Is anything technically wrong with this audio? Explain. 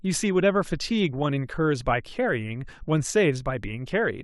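No, nothing technically wrong can be heard in this speech recording; the signal holds steady and intact all the way through.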